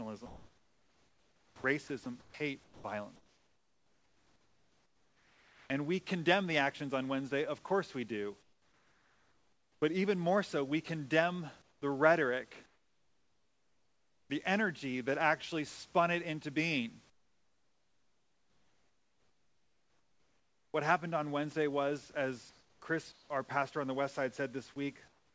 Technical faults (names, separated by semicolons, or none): sound chopped by the voice detector; comfort noise in place of the background; sound dropped by the voice detector